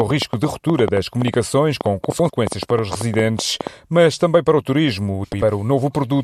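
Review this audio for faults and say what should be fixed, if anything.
There's a train of clicks running from the very start, about 0.01 s, up to 3.68 s, ending just before "mas também para o". They come at roughly 7.7 per second but unevenly spaced, around thirty in all, each a similar sharp pop peaking about 10 dB above the speech and clearly audible in the gaps too. That repeated same-shaped impulse points to likely electrical interference or a faulty connection or power supply. Re-record with the interface on a clean supply and cables away from other gear.

There are also two spots of frames out of order, at 2.10 to 2.30 s and 5.23 to 5.43 s. In each, two neighbouring blocks of about 93 ms got swapped, which fits runs of four frames each. The stretch plays with its halves exchanged, giving a garbled flutter, though nothing is lost in length. It's worth checking the packet sequencing or the reorder buffer in the transport or decoder so frames are put back in order before decoding.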